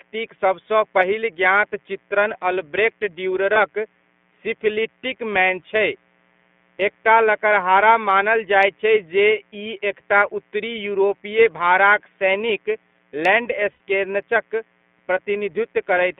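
A mains buzz runs through the whole recording: switching spikes from the 60 Hz supply have leaked into the signal path, putting a ladder of harmonics under the speech. It stays faint, roughly 40 dB below the speech, but it is a constant, gritty rasp.

The speech has also passed through the iLBC codec in 20 ms frames, which fits its 15.2 kbps mode. The line keeps only about 200 Hz to 3.5 kHz, so the voice sounds narrow and muffled. The coding damage is plainly audible as a rough, slightly synthetic edge on the speech.

Lost iLBC frames come next. From 3.54 to 3.57 s, just after "पहिल ज्ञात चित्रण अल्ब्रेक्ट", a packet went missing, a gap that fits a single 20 ms frame. The decoder filled it by repeating the last pitch cycle with noise, which is heard as a brief buzzy smear before the speech resumes cleanly.

From 13.72 to 13.80 s a longer loss of 80 ms, consistent with four consecutive frames, was concealed the same way. 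The repeated pitch cycle fades as it goes, so the sound becomes a held, breathy vowel. Clear speech returns almost immediately afterwards.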